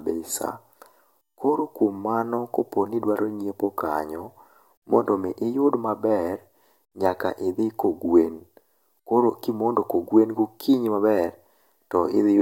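A speech recording in which no technical fault can be heard anywhere in the signal.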